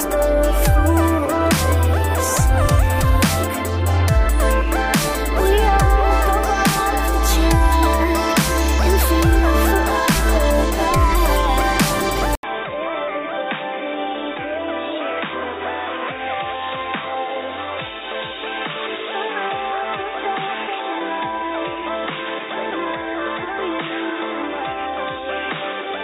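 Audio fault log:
12.35 s to end: input switched to a poorer device, likely; after an 80 ms silence, audio drops about 10 dB, loses everything above 3.8 kHz, and gains a new noise floor well below the signal.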